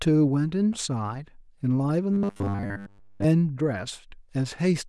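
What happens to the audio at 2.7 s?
At 2.7 s the speech turns into a rigid, metallic buzz at 100 Hz from 2.13 to 3.24 s: robotic sound from repeated short buffers, likely from most of the audio being replaced by repeats of 10 ms chunks.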